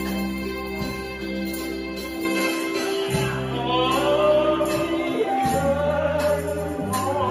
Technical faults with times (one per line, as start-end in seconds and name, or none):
2.25-7.30 input switched to a poorer device